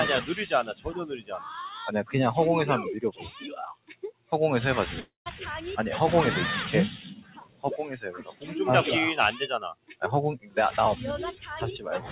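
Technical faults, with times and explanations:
Throughout, noise suppressor applied to music or sounds: the level pumps and thins, with sustained parts and decaying tails sinking while sharp onsets survive. A suppressor tuned for speech treats steady material as noise, so gain swings by roughly 15 dB.
0.68–1.38 s, 1.69–2.14 s, 3.12–4.32 s, 6.98–8.54 s, 9.75–10.02 s, 10.39–10.57 s, 11.33–11.50 s, sound cut by the noise suppressor: held and fading portions drop away by about 11 to 19 dB, tails clipped short. The suppressor misread these stretches as noise and attenuated them harder than the surrounding audio.
5.00–5.28 s, long network dropout: the sound turns into a fading continuation of the last sound for about a quarter second, ending in roughly 150 ms of silence before audio resumes with that portion missing. The cause is likely lost packets, with the receiver concealing the gap until it gave up.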